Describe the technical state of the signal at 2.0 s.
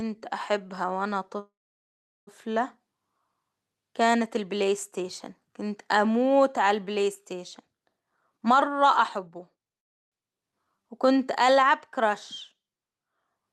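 At 2.0 s the signal is inside a call audio freeze running from 1.39 to 2.29 s, just after "أحبها وأنا". The last sound is stretched into a short decaying buzz and then about 0.75 s of silence, most likely because packets stalled and the jitter buffer ran empty. Unlike packet loss, nothing is cut out. The speech picks up exactly where it stopped, about 0.88 s later than it would have.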